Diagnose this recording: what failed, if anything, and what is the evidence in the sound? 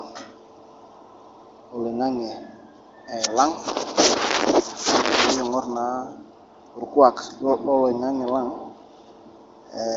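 Nothing in this recording has failed, and no stage of the chain shows a fault. What can be heard is the AMR wideband (HD Voice) codec working at a high rate, which fits the 23.05 kbit/s mode, with the speech band stopping near 7.5 kHz as that codec's design dictates.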